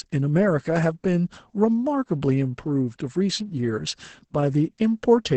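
The whole speech clip has passed through Opus voice compression at a very low bitrate, with the sound pointing to roughly 10 kbps in the SILK linear-prediction mode and a wideband limit. The top of the spectrum is cut off near 8 kHz, and the coarsely quantised excitation leaves heavy damage throughout: the speech sounds muffled and hoarse, with a slightly robotic, buzzy texture where the fine harmonic detail has been lost.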